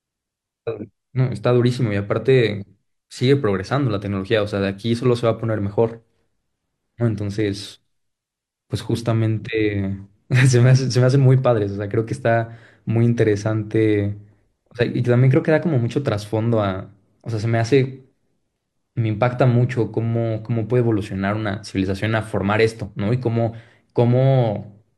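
Nothing stood out as a technical problem on listening to this speech recording.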